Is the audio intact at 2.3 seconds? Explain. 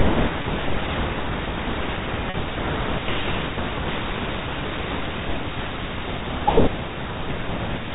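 No. Packet loss with pitch repetition hits from 2.30 to 2.34 s. About 40 ms went missing. The receiver repeated the last pitch period, giving a briefly held, buzzy tone.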